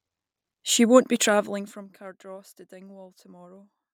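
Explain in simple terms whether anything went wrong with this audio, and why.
Something did go wrong: there's zipper noise between about 1.28 and 1.95 seconds. During that stretch the speech gets turned down a long way, but instead of sliding down smoothly, the volume drops in lots of tiny separate steps, roughly forty of them every second. Each little jump makes a faint click, and all those clicks together sound like a ticking or zipping sitting on top of the speech until the level stops moving.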